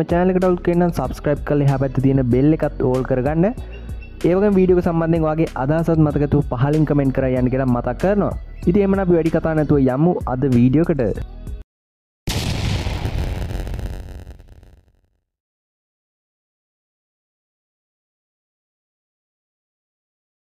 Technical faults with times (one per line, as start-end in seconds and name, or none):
12.75-20.44 block size mismatch (padded)